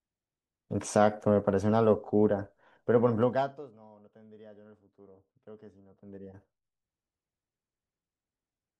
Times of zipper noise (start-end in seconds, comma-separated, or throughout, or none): 3.20-3.72, 5.85-6.90